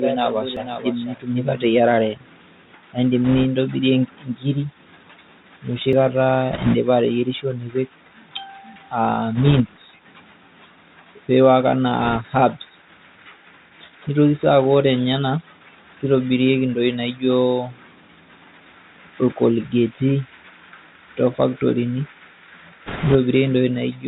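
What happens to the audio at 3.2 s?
From 3.25 to 3.45 s, bit errors on a Bluetooth voice link, at a rate of a few percent, add a rushing, crackly noise. Because each flipped CVSD bit nudges the signal only one small step and the error fades, this sounds like a wash of grit, unlike the sharp clicks of corrupted PCM samples.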